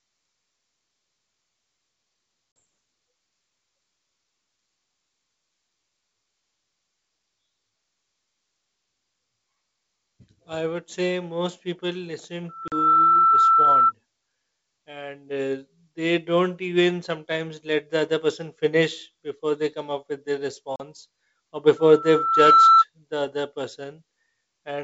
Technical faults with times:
2.56-2.59 packet loss on an ADPCM call
12.49-13.92 loudspeaker feedback squeal
12.68-12.73 packet loss on an ADPCM call
20.76-20.80 packet loss on an ADPCM call
21.76-22.84 loudspeaker feedback squeal

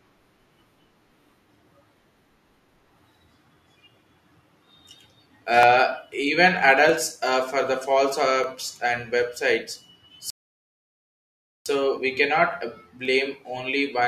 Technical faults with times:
5.63 dropped samples
6.89 dropped samples
8.44 dropped samples
10.30-11.66 rebuffering stall
13.05 dropped samples

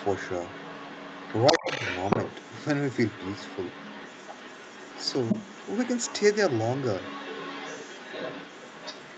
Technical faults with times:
0.00-9.18 other side's voice leaking through
1.52-1.70 speech suppressed in double talk

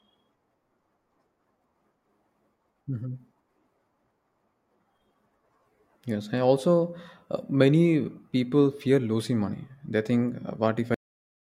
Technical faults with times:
10.94-11.57 cut-off end

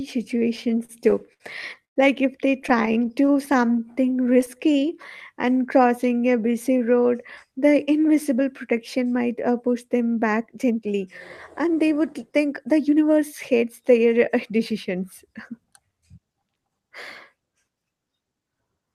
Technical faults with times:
0.57-1.98 repeated stalls (stutter)
2.62-4.63 repeated stalls (stutter)
2.72-4.94 jitter buffer slow-down
5.34-6.91 jitter buffer slow-down
8.72-11.02 jitter buffer speed-up
11.60-14.13 jitter buffer speed-up

